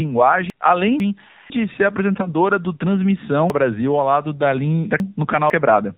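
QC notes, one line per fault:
Throughout, AMR narrowband mobile codec: nothing above 4 kHz, and the voice sounds buzzy and synthetic. That fits AMR-NB at a low rate of about 7.4 kbps.
0.5–1.5 s and 3.5–5.5 s, chunks out of order: 500 ms blocks play late, one block behind in the first span and three in the second. The result is jumbled speech with hard joins.
2.14–2.30 s, AMR bit errors: a brief hoarse, gargly scratch while pitch and level hold. Corrupted less-protected bits misplace the excitation pulses, which fits about four damaged 20 ms frames.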